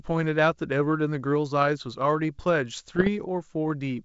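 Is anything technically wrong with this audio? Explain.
Yes. Bit errors on an ADPCM link, from 2.88 to 3.09 s. Flipped bits, around half a percent of them, knock the decoder's step size and predictor off track, so each error rings on briefly as pops and rough bursts with sudden level jumps over the G.722 wideband speech.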